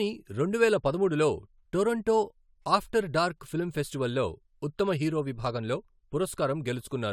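No technical faults can be heard anywhere in the recording; the speech signal arrives intact, with no dropouts, distortion, glitches or other defects.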